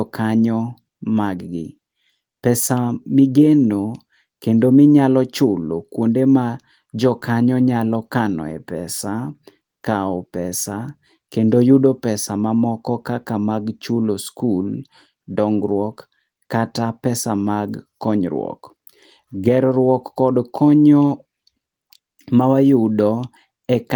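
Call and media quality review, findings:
No audible faults found in this speech recording.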